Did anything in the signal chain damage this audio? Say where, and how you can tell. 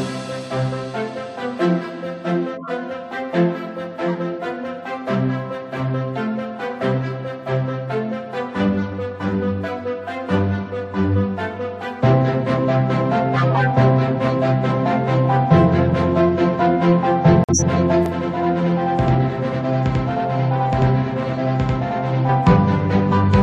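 Yes. The codec stage damaged it with corrupt frames decoded. Brief chirps and noise bursts appear at 2.55–2.70 s, 4.08–4.17 s and 13.36–13.67 s. Flipped bits in compressed frames were decoded anyway. Misread gains and codes put energy at wrong frequencies for about the length of each damaged frame.

There is also a corrupt frame muted. At 17.44 s the sound drops abruptly into silence until 17.62 s. The decoder rejected damaged frames and the player filled the gap with silence. The 0.18 s hole fits about three frames. Timing after it holds.

From 18.06 to 22.29 s there is a channel delay causing doubling, at the driver or buffer stage. Every sound repeats as an equal-level slap 92.88 ms later. One channel runs late, which fits a 4096-sample buffer, and the mono sum exposes the copy.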